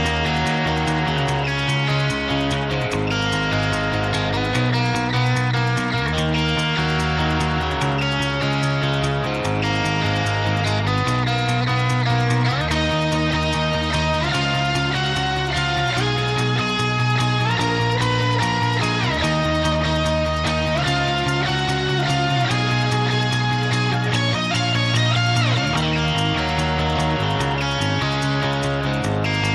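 Nothing stood out as a technical fault on listening.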